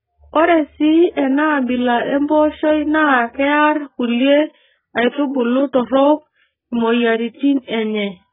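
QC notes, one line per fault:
Throughout, AAC compression: the speech is heavily damaged, dull and smeared, with a warbling, fizzy texture on sustained sounds and sibilants. Nothing survives above 3.7 kHz, which fits a very low bitrate of around 8 kbps in AAC-LC, the likely cause. At that rate the encoder lowers its cut-off and starves bands of bits. On a spectrogram there is a hard ceiling at 3.7 kHz, with patchy holes and blotchy fill below it.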